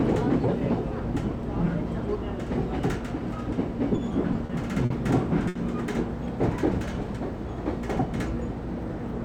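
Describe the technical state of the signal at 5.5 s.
A short stall from a late packet runs from 5.48 to 5.57 s. A packet arrived late, the jitter buffer emptied, and the receiver filled about 70 ms by stretching the preceding sound. Nothing is lost, but that sound hangs briefly with a faint buzz or dip, and everything after is 70 ms later.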